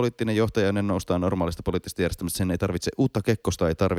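No technical faults occur at any point in the clip, so there is nothing to place in time order.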